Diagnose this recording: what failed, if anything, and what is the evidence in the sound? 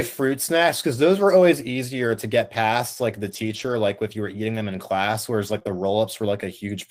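Network stage, lost packets rebuilt from error correction: from 3.27 to 3.73 s, again from 5.47 to 5.57 s, and briefly at 5.67 s, the speech turns rougher and noisier without any gap. The decoder played low-bitrate redundant copies carried in following packets in place of the lost originals.

Network stage, short concealed packet loss: from 5.59 to 5.63 s and 5.63 to 5.67 s, each about 20 ms missing, the sound briefly smears or wobbles. No redundant copy arrived, so the decoder extrapolated the preceding sound and crossfaded back into received audio.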